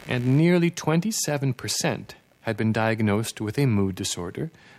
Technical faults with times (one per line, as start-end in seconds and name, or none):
0.00-4.78 computer activity noise